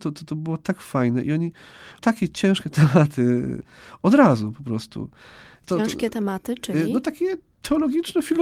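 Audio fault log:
Nothing to flag here: the speech comes across without any fault that a listener would pick out.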